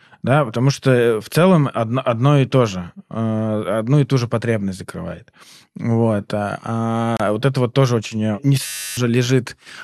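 A gap at a join of encoded pieces opens from 7.17 to 7.20 s, just before "вот это вот тоже". The speech was encoded in separate sections and spliced without trimming, so the encoder's start-up delay and its final-frame padding both remain as silence. The result is a hole of about 30 ms in otherwise continuous speech, with abrupt edges softened by the codec. The speech then resumes exactly where it broke off.

A system hang loop follows from 8.66 to 8.97 s, right after "тоже очень э не". The computer or its driver stalled while the audio hardware kept replaying its ring buffer. A 10.67 ms slice, which fits a 512-sample buffer, repeats 29 times. At that length the repetition merges into a steady buzz at 93.8 Hz rather than a stutter. About a third of a second of speech is lost under it.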